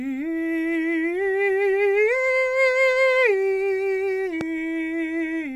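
A music clip with one loud pop at 4.41 to 4.43 s, roughly 10 dB above the music. It is likely an electrical transient such as a switch or static. Unlike a dropout, the music carries on unbroken beneath it.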